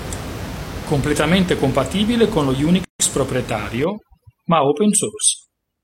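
At 2.85 s, right after "compatibile con lo", the speech drops into a hole of about 150 ms before picking up exactly where it left off. That's a gap at a join of encoded pieces: two separately encoded chunks were butted together without trimming, so encoder delay and last-frame padding stay in. The edges are smeared by the codec.

From 3.84 s to the end, overdone noise removal kicks in. The room noise, sitting about 13 dB under the speech, drops and breaks up into little twinkling specks, and the quieter parts of the speech are gated out with it.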